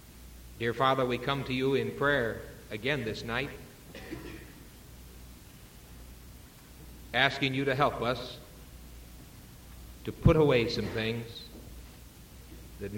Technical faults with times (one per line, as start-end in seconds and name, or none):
0.18-12.68 word clock ticks